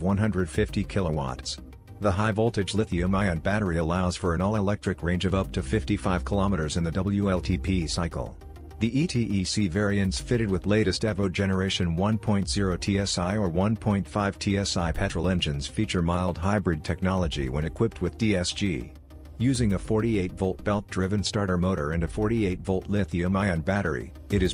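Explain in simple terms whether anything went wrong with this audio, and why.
Nothing went wrong with this audio; no technical fault can be heard anywhere in it. No moment stands out as a problem, so there is nothing to explain.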